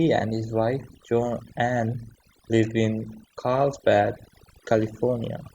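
From start to end, the gaps between phrases drop to an unnatural near silence dotted with twinkling specks. This is overdone noise removal: a noise reduction stage was pushed too hard, so any frequency band sitting close to its noise estimate was cut deeply or shut off entirely, taking the quieter parts of the voice along with the background noise.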